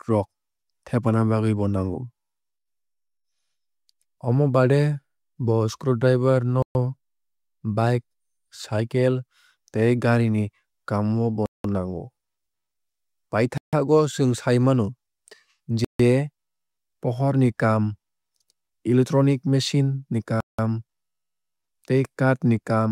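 At 6.62 s, just after "bo screwdriver", the speech cuts to silence for 127 ms and resumes where it left off. Similar gaps follow at 11.46, 13.58, 15.85 and 20.40 s, each 150 to 185 ms. These are likely Bluetooth stalls, where the receiver's buffer ran empty while delayed packets were resent.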